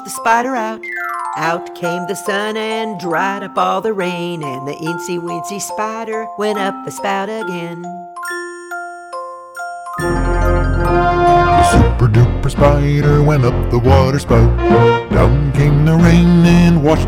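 Hard clipping first appears at 0.27 to 0.38 s and again at 3.58 to 3.63 s, with peaks pushed about 3 dB and 2 dB past the limit and sheared flat, giving brief crackles. From 10.96 to 12.24 s and 12.61 to 16.94 s the overload reaches about 6 dB and 5 dB, and every loud moment turns to harsh fuzz. The abrupt flat tops spray high harmonics, unlike the rounded, warmer thickening of soft saturation.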